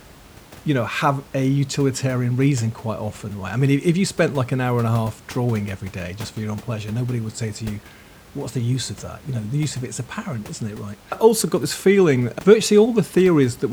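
Nothing technically wrong turns up in this speech recording, just a bit of background noise from the room sitting about 24 dB below the speech.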